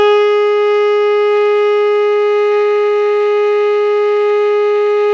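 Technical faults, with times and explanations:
No technical faults can be heard in this music.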